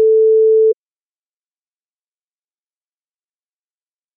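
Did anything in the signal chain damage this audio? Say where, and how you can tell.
Yes, at the codec decode stage. Compressed frames were skipped between 0.71 and 0.73 s. The sound jumps forward by roughly 70 ms. Whole frames never reached the output.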